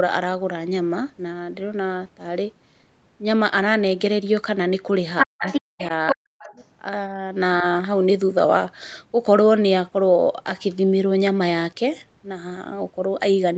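This speech clip shows residual echo from the far end, most likely because the echo canceller left part of the loudspeaker signal in the microphone feed. The other side's voice leaks through in short scraps at 5.19, 5.47, 5.79, 6.08 and 6.39 s. Some are roughly as loud as the talker, and those at 5.79 and 6.39 s are noticeably quieter. The same canceller, likely confused by both sides talking at once, suppressed the talker's speech in double talk from 5.25 to 5.8 s and from 6.15 to 6.37 s, where the near voice drops almost to silence in pieces.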